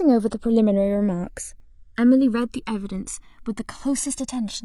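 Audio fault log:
throughout, channels drifting apart: the two sides run on slightly different clocks, roughly 200 ppm, so the gap creeps up to around 1 ms and you get a slow flanging sweep when summed.
1.6 s, damaged data in a compressed stream: a bit of the stream is corrupt, so the decoder loses sync and hunts for the next frame, leaving a short blip.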